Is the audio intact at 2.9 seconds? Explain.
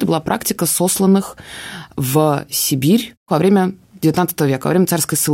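Yes, at 2.9 seconds the speech runs on cleanly, with no dropout, click, distortion or other fault to be heard at that moment.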